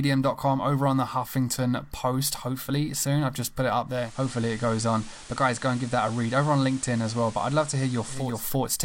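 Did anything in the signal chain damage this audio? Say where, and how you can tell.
Yes, at the radio receiver: digital radio blending to analogue. After "just put it up", a 0.4 s cross-fade at 3.86 s hands over to FM until 8.45 s. The spectrogram shows a hiss floor about 20 dB below the signal. The waveform level is unchanged.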